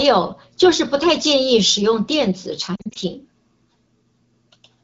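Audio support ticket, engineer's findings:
Lost AMR speech frames, 2.75–2.98 s: brief dips and warbling scattered across 200 ms. Decoder concealment repeating last good parameters at falling gain. About 120 ms lost, in short gaps no longer than 40 ms. Link-level errors probable; AMR-WB codec itself sounds clean.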